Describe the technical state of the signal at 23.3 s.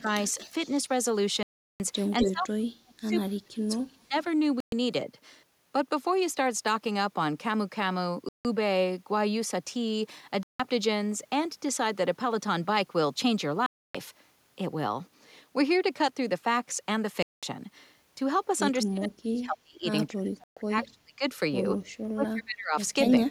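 At 23.3 s the speech is hit by speech suppressed in double talk, from 23.25 to 23.30 s, about 50 ms. The level ducks deeply, around 30 dB, likely because the echo canceller could not separate this side's talker from the loudspeaker echo of the far side and turned both down.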